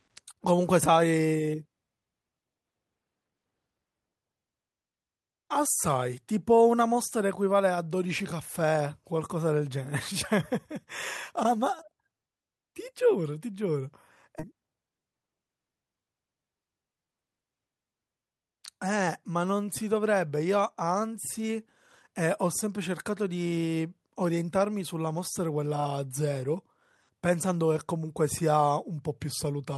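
Speech, with two faults close together. At 14.39 to 14.41 s a stretch of queued audio was dropped, a skip ahead: about a second of speech vanishes, and the two sides join with no gap. Then, from 14.54 to 15.66 s, the buffer was still holding more than its target, so a jitter buffer speed-up trimmed pitch periods, roughly 150 ms in total. The speech runs about 113% fast at unchanged pitch and sounds hurried.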